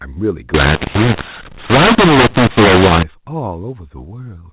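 Telephone-band speech, cut off at 4 kHz, has a mu-law and A-law mix-up from 0.54 to 3.03 s. A-law samples decoded as mu-law scramble the levels, so the waveform turns jagged and the spectrogram's pauses fill with noise.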